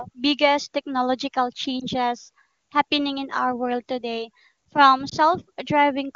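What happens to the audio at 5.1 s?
A brief dip or warble in the speech, from 5.09 to 5.14 s, is a lost AMR speech frame. The gap fits a single 20 ms frame that failed its checksum, so the AMR-WB decoder filled it by repeating the previous pitch and vocal tract settings at reduced gain.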